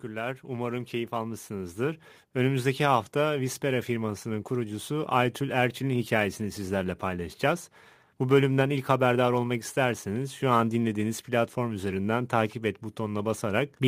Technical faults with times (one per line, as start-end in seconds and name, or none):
0.00-13.88 sample clock jitter
0.05-7.43 automatic gain rising